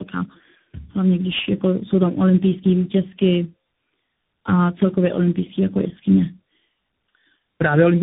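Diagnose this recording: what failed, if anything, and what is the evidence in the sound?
The codec stage failed through tandem speech coding, audible throughout the clip. The speech is rough, muffled and warbly, with nothing above 3.7 kHz. The roughness is layered: each coder's artefacts sit on top of the last one's. That fits about three speech codecs in a row, such as AMR-NB twice and then CVSD, with decode and re-encode at each link. A single low-bitrate codec would warble too, but it would not build up this compounded degradation.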